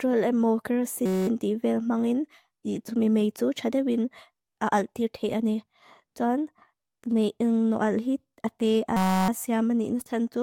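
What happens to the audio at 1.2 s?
A system hang loop runs from 1.06 to 1.28 s: the system froze while the hardware replayed one 5.33 ms buffer, which fits 256 samples, producing a steady 188 Hz buzz.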